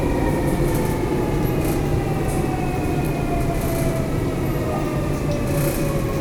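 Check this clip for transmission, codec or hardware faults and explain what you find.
Nothing here points to a transmission, codec or hardware problem; the sound comes through steady and intact all the way along.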